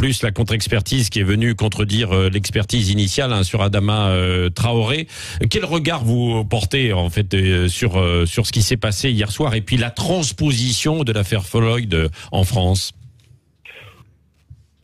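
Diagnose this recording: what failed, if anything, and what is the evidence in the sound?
Nothing in the sound points to a failure at any stage of the chain, from the analogue wiring through to playback.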